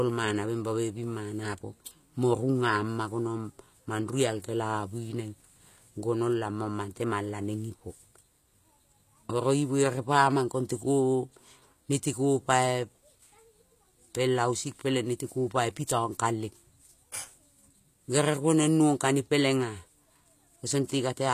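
All the way through, the treble on this speech sounds rebuilt rather than captured, with gritty, lispy s sounds and nothing above about 14.9 kHz. That's likely HE-AAC compression, which fits a low bitrate around 24 kbps, copying lower bands upward to fake the top end.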